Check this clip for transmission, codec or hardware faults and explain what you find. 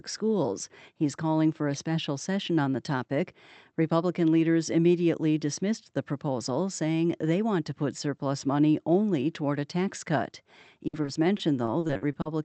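One transmission fault appears near the end, after "toward a tax cut".

From 10.87 to 12.27 s the speech turns choppy and robotic: repeated packet loss, with about a quarter of that stretch patched by extending earlier sound across gaps up to 60 ms long.

The call path itself limits the audio to about 8 kHz, which fits an Opus codec at a moderate bitrate.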